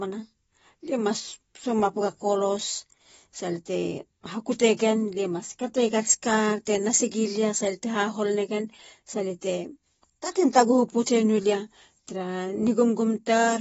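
From start to finish the speech sounds dull and smeared, with a warbling, fizzy texture on sibilants and held vowels, and nothing reaches above 7.6 kHz. This is likely AAC compression, AAC-LC coded at a low rate, which fits about 24 kbps. Short of bits, the encoder drops the top of the spectrum and quantises the remaining bands coarsely, leaving gaps and noisy fill between them that shift from frame to frame.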